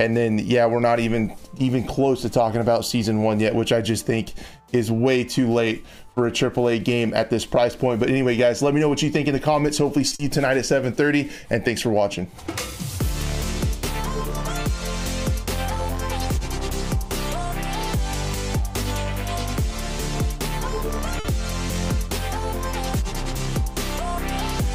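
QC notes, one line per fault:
10.07–10.14 s, short stall from a late packet: a packet arrived late and the jitter buffer ran dry, so the receiver held the last sound for about 40 ms until it came, then resumed at the same point. Nothing is lost, but the sound hangs briefly with a slight buzz or dip, and playback now runs 40 ms later.
10.15–10.22 s, short concealed packet loss: right after that stall, 40 ms of audio never reached the decoder, and the receiver filled the gap by extending the preceding sound before blending back. This is heard as a brief smear or wobble, and a short sound may be dropped.
21.20–21.28 s, short stall from a late packet: again a packet was late and the jitter buffer emptied, so the last sound was stretched for about 50 ms while waiting. No audio is missing, but there is a short held moment with a slight buzz or dip, and the delay grows by 50 ms.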